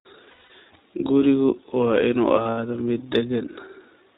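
Throughout, the speech is a little rough and synthetic, with plainly audible coding damage and nothing above 4 kHz. That is the iLBC codec, coding each frame's excitation on its own; the sound fits 15.2 kbps with 20 ms frames.

At 0.30 to 0.51 s and again at 2.42 to 2.59 s, the speech smears into a held, buzzy vowel. These are lost iLBC frames: 180 ms missing across 200 ms, then 120 ms across 160 ms, with runs near 100 and 70 ms. The decoder repeated the last pitch cycle with noise, and clean speech returns almost at once.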